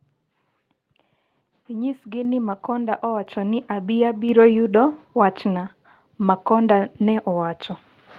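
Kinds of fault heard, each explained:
Microphone volume stepped up: The call software raised the input gain in sudden steps of about 6, 5 and 3 dB, so the speech and background jump louder together around "ni abi".
Lost packet rebuilt from error correction: A lost packet was replaced by its low-bitrate backup copy, so just after "yudo wach'na" about 20 ms sounds briefly rougher and noisier, with no gap.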